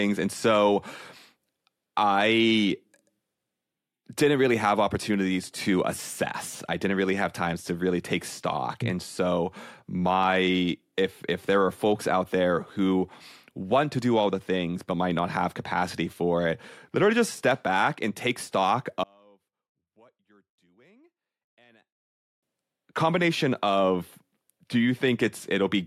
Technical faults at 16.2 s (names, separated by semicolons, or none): none